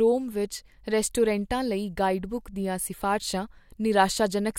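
No technical faults can be heard anywhere in the speech recording.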